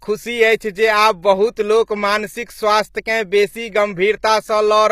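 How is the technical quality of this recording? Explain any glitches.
The recording is clearly degraded by compression across the whole clip. The speech carries HE-AAC compression damage from start to finish: the treble is most likely rebuilt by spectral band replication rather than coded, which fits a low bitrate around 24 kbps. Upper bands are copied from lower ones, so their harmonics don't line up with the true voice, and s sounds come out gritty and metallic. A spectrogram shows repetitive, smeared texture in the upper bands and nothing above 15.5 kHz.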